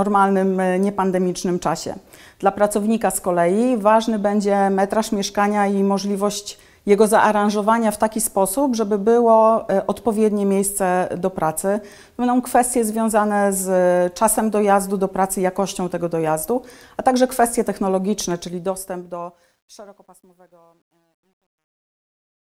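Truncation distortion on a fade sets in from 18.36 s to 22.41 s as the level falls away in a fade-out. Between 19.84 s and 22.42 s the tail turns gritty. Unlike codec artefacts, this roughness worsens steadily as the level drops, which fits an undithered gain stage keeping only about 11 bits.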